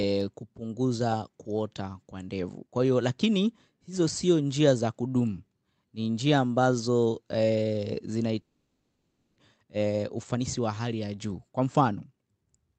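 It's a speech recording, and around 8.41 s the audio drops out until about 9.40 s, most likely a long network dropout. The receiver stretches the last bit of sound for nearly a second as it fades, then it's essentially silence for most of that second, and roughly 0.6 s of the speech never comes back. After that you get a jitter buffer speed-up from 9.58 to 12.21 s. The receiver is draining the backlog that built up during the gap, snipping out tiny pitch-period slices so the speech runs at about 113% speed without changing pitch. It sounds a bit rushed, and it claws back around 0.4 s of delay. Throughout, the top end stops near 8 kHz, which fits an Opus call link at about 32 kbps.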